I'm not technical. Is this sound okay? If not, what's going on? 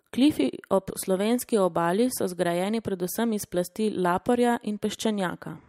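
Yes, nothing stood out as a problem when listening to this speech recording.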